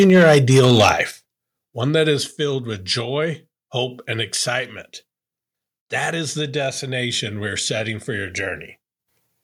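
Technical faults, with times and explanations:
0.0–1.01 s, microphone overload: The input level was likely set far too high, driving peaks about 7 dB past the converter's ceiling and flattening around one sample in twenty. The sliced waveform tops give the loudest syllables a harsh, crackling, gritty edge.
0.1 s, 1.11 s, 2.31 s, microphone volume stepped down: The call software likely reacted to the overloaded input by cutting the device gain in single jumps of about 2, 7 and 4 dB. Voice and background drop abruptly together, the second just before "one that is" and the third between "one that is" and "with joy hope and".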